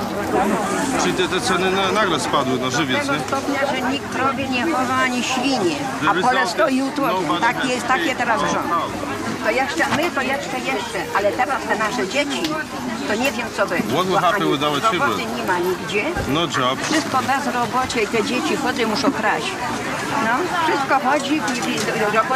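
No technical faults can be heard anywhere in the clip. Nothing in the audio calls for a timestamp or a diagnosis.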